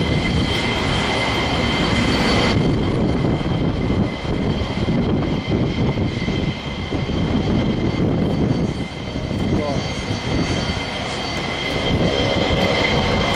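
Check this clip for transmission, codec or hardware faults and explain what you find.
The audio signal shows no transmission, codec or hardware faults, with nothing to indicate damage anywhere in the clip.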